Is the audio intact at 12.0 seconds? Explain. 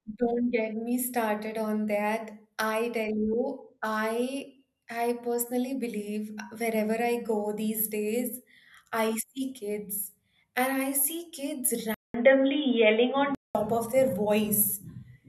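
No. At 12.0 seconds the speech sits inside a stretch from 11.94 to 13.55 s where the input likely switched to a poorer device. A short silence of about 200 ms marks the change. The sound then turns dull and boxy, with nothing above 3.7 kHz. The level shifts by a few decibels, and a new noise floor appears well below the speech. Full clarity returns just before "of their".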